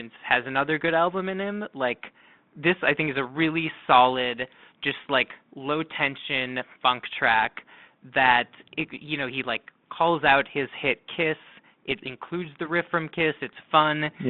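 The speech in this clip has nothing technically wrong with it, so there are no fault times or causes to report.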